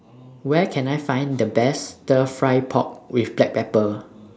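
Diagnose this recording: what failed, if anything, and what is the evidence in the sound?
What failed is the call processing stage, specifically automatic gain rising. From 0.09 s to 2.75 s the speech and the room noise under it swell together by about 5 dB, as the AGC decides the input's too quiet and gradually winds its gain up. The band-limited call sound, nothing above 8 kHz, is just the expected microphone path.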